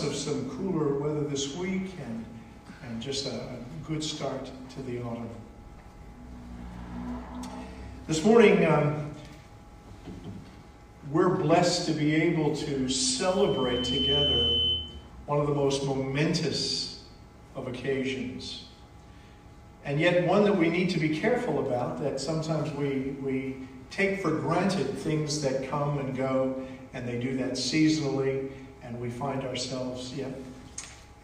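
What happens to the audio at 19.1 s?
Nothing goes wrong at 19.1 s; the audio plays through that moment intact, with no dropout, click, glitch or other fault.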